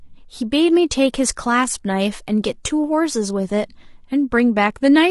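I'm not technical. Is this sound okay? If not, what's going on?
No. From start to finish the speech sounds rough and grainy, with a fizz clinging to the voice and a thin, artificial top end. This is likely low-delay AAC compression, the kind used on video calls, squeezing the audio hard. With too few bits to spend, it can't capture the voice cleanly, so gritty noise fills the gaps between its tones. Unlike ordinary background hiss, this graininess rises and falls with the voice.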